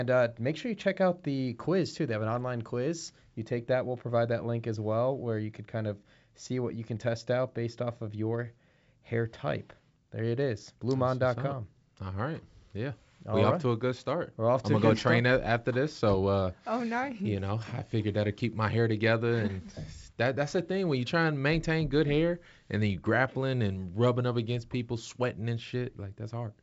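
Nothing technically wrong turns up in this speech recording, which carries the expected sound of G.722 wideband telephone coding at 64 kbit/s, with nothing above about 7.7 kHz and at most a faint trace of the codec.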